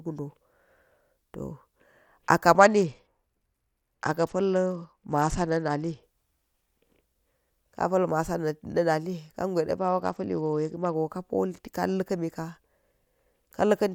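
Speech over a congested Bluetooth link suffers two SBC bit pool drops, 2.57–6.03 s and 9.78–10.95 s. Starved upper sub-bands dull the treble while coarse quantisation adds gritty noise.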